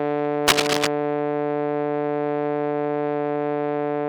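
From 0.48 to 0.87 s, scratchy, rustling bursts of cable scratch noise run across the music at roughly its own level, likely from a worn cable or connector being moved.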